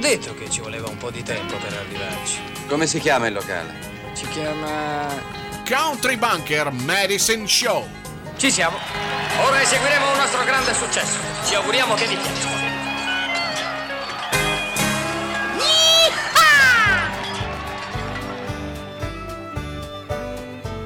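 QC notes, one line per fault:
No technical faults were found anywhere in this signal.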